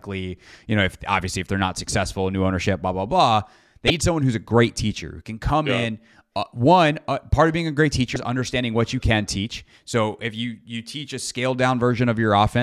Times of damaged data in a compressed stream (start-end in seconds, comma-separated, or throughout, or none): 3.87-3.90, 8.13-8.16